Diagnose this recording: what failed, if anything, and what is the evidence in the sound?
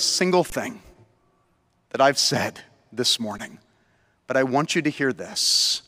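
Buffer underrun with held sample. Speech goes flat at 0.50–0.52 s and 3.38 s. The converter held its last value, then resumed softly.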